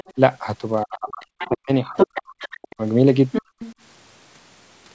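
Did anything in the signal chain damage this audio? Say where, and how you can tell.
Yes. The damage is in the call processing stage, in the echo canceller. The band stops at 8 kHz, which fits the G.722 codec at 64 kbps.

Other side's voice leaking through: a second voice appears at 0.00–0.14 s (about 20 dB below the talker), 1.40–1.49 s (about 15 dB below), 1.97–2.75 s (roughly equal level) and 3.32–3.74 s (about 5 dB below). It is a separate voice with its own timing, not a smeared copy of the talker. That points to loudspeaker pickup that cancellation likely left behind.

Speech suppressed in double talk: from 0.84 to 2.24 s the talker's voice is pulled down in pieces, about a second in total, dipping by roughly 40 dB. A brief dip of roughly 35 dB follows at 2.59–2.81 s. Both line up with the leaking voice, so this is likely cancellation ducking both sides, not a network dropout.

Background gated by the echo canceller: at 3.42–3.59 s the room sound itself drops by about 33 dB for roughly 150 ms, then returns. 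This happens while the other side plays (3.32–3.74 s), so the loudspeaker triggers the gate, not the talker pausing.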